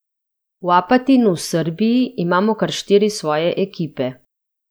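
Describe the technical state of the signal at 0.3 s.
At 0.3 s the signal is intact, with no dropout, distortion, or other fault audible at that moment.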